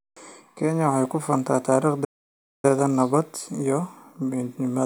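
At 2.04 s the speech cuts off abruptly and the output falls completely silent until 2.65 s, a playback stall of about 0.59 s. The likely cause is the player running out of buffered data or its playback thread being blocked, so nothing reached the output until it recovered. On a waveform this appears as a flat silent gap with hard edges, and on a spectrogram as a clean vertical blank band across all frequencies.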